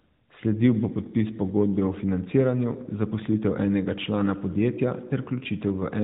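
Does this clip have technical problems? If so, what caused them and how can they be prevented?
No, there's nothing here to fix or prevent; the 4 kHz ceiling of a mobile AMR narrowband call is simply how that channel sounds.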